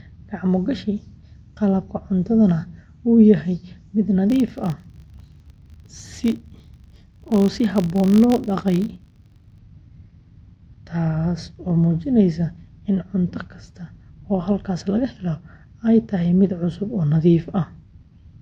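The clip is speech with one fault. From 4.3 to 9.62 s, a filter is restarted on every block. It loses its stored state at each block boundary and starts again from silence. Each restart leaves a small transient. These transients repeat 50 times a second, which fits blocks of about 20 ms. They form a steady 50 Hz buzz under the speech. The buzz rises and falls with the level of the speech.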